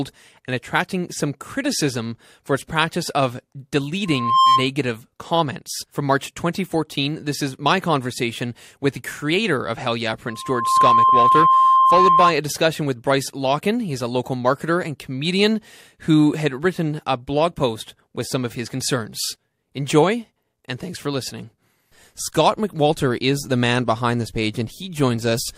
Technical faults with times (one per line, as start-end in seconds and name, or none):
4.06-4.69 loudspeaker feedback squeal
10.28-12.35 loudspeaker feedback squeal